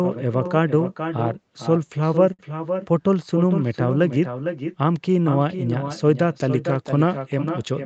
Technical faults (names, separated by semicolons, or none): echo with no canceller; short stall from a late packet